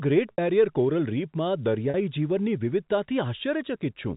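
At 0.33 s, just before "બેરિયર કોરલ રીફમાં", and again at 1.9 s, just after it, there is packet loss with pitch repetition. About 60 ms, then 40 ms, of speech went missing. The receiver bridged each gap by repeating the last pitch period, so the first, longer one fades into silence before the speech returns with a short cross-fade, and the second sounds like a brief held, buzzy tone.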